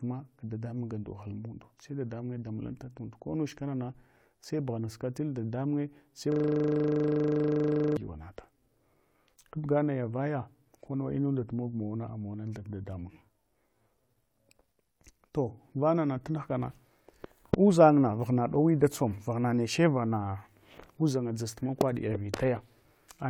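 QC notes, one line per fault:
6.32–7.97 s, system hang loop: after "bughanask tunda dadamunye sai", one 40 ms slice repeats 41 times at 25 Hz. This gives a rasping buzz while the frozen system's buffer keeps cycling.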